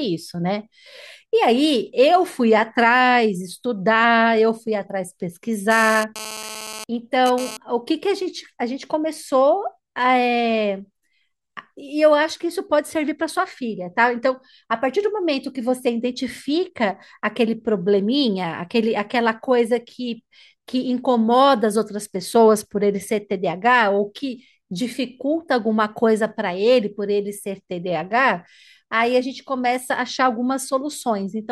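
A nearby 2G handset exchanging data made the recording chain rectify its radio bursts, so this speech clip carries GSM phone buzz from 5.71 to 7.57 s. The transmitter pulses about 217 times a second, and the demodulated pulses become a hard, raspy buzz at that rate with a dense stack of harmonics, sitting about 12 dB below the speech and unrelated to it. Because the phone was transferring data, the buzz arrives as a burst rather than a steady drone.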